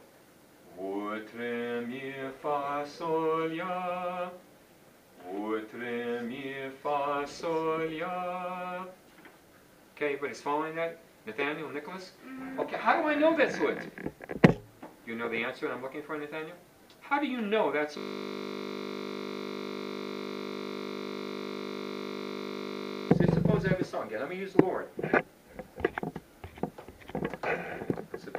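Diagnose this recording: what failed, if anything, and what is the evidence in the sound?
A system hang loop at the driver or buffer stage runs from 17.98 to 23.11 s. One 20 ms block repeats exactly, hundreds of times, as a steady 50 Hz buzz. The waveform shows identical 20 ms cycles, and the spectrogram shows harmonic lines spaced 50 Hz apart.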